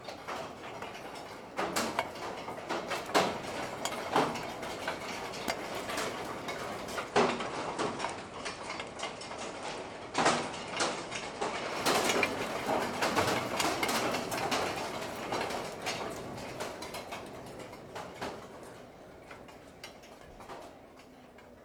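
Digital radio blending to analogue, 7.01 to 11.79 s: the digital signal dropped and faded to FM in 137 ms, dipping level about 2 dB, and adding low hiss.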